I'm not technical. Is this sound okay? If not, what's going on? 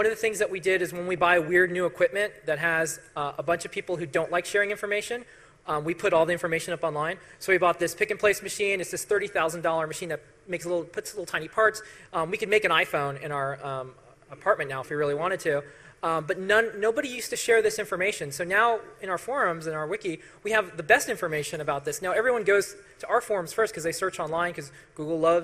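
No, it isn't quite right. Throughout, the audio sounds dull, with a gurgly, grainy edge you can plainly hear. That's likely MP2 compression squeezed too hard: the upper parts of the sound get switched off, and what's left is stored too roughly.

Between about 1.18 and 1.46 s there's a short patch of DAB burbling: watery, bubbling blips. That's what happens when a weak digital radio signal lets errors slip through, so bits of the sound briefly go wrong or jump in level.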